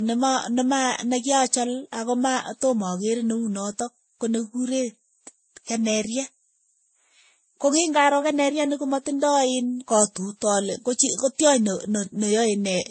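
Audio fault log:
throughout, transcoding between lossy codecs: nothing above 8.3 kHz, with artefacts of different kinds layered together, likely from several lossy codecs in series, not one.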